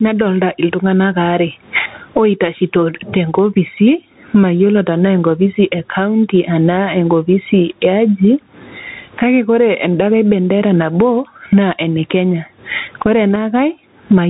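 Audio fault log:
throughout, gain pumping: the gain swings by about 25 dB, likely excessive microphone gain driving a fast limiter that squashes the speech.
throughout, Bluetooth CVSD headset codec: nothing above 3.8 kHz survives, s sounds turn scratchy, loud bright peaks distort, and granular hiss lies under the speech, which fits a 64 kbps one-bit delta coder.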